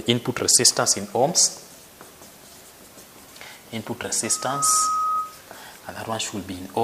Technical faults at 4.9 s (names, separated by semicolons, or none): loudspeaker feedback squeal